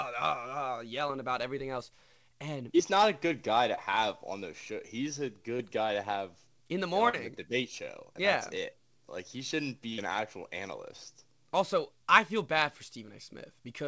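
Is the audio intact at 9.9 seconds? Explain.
No. A burst of packet loss spans 9.93 to 10.0 s: the receiver stretches and fades the last sound for 47 ms, a smeared, decaying spectrogram band, then skips 40 ms.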